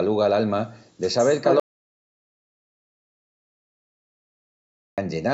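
At 1.60 s the input was likely lost, through a disconnected device, failed link or stray mute, and silence was written instead: an audio dropout to silence lasting 3.38 s, with speech cutting out and returning at 4.98 s, no room tone in between, and its content gone.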